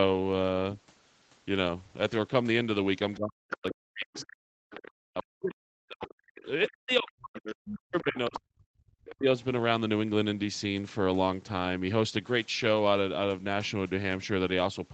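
From 3.13 to 5.23 s, the other side's voice leaking through appears as a faint second talker about 15 dB under the main speech, most likely loudspeaker echo that the canceller failed to remove. It returns at 6.67 to 7.11 s, 7.65 to 8.4 s and 9.04 to 9.15 s, ranging from roughly 25 dB down to about 10 dB down at its strongest. On a spectrogram it shows as a weaker, overlapping set of harmonics beneath the main voice, all within the 8 kHz band of the call.

Running from 3.17 to 9.27 s and overlapping those bursts, speech is suppressed in double talk for around five seconds in total. With both sides active, the echo canceller was likely unable to separate the talker from the echo and attenuated everything together. The voice sinks, loses its top end and breaks off in pieces, with the deepest drops reaching around 40 dB. The waveform shows the envelope collapsing in jagged gaps, and the spectrogram shows the high harmonics fading out during those stretches.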